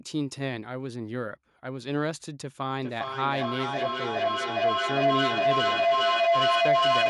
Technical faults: feedback howl

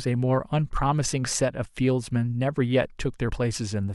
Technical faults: damaged data in a compressed stream

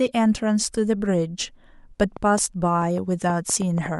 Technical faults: train of clicks

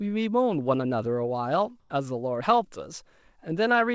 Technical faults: comfort noise in place of the background

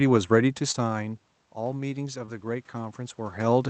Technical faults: automatic gain rising; short concealed packet loss

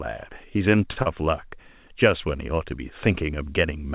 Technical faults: short stall from a late packet; short concealed packet loss

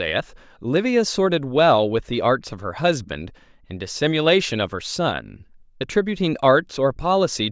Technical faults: none

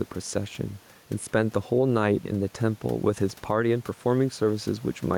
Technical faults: gain pumping

